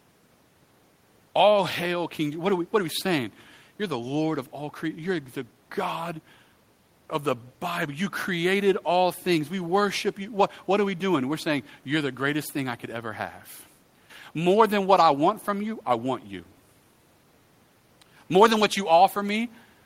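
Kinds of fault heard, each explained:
No technical faults heard.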